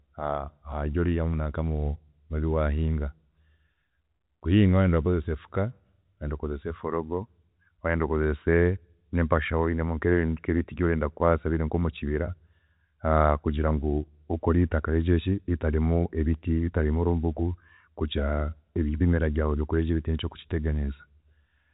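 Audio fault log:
No faults heard; the speech shows the 4 kHz band limit expected of G.711 telephone coding.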